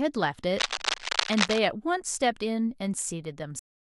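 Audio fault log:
0.56–1.59 s, cable scratch noise: dense, uneven bursts of scratching and rustling sit over the speech for about a second, roughly as loud as the speech itself. This is likely a worn cable, connector or control being moved, its contact resistance fluctuating rapidly and injecting noise.
3.59 s, cut-off end: the speech stops mid-sound and drops straight to digital silence with no natural decay, staying silent to the end of the clip. The final stretch of audio was never written or played out, so the sound is simply truncated.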